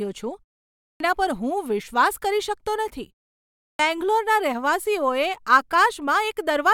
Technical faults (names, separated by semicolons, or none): clipped start after a pause